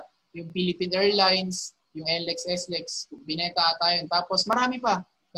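From 0.50 s to 4.53 s, a short click recurs every 1.34 s, about four in all. These are likely clock drift buffer slips: two free-running clocks differing by roughly 700 ppm force the buffer to drop or repeat a block of about 50 samples at each slip.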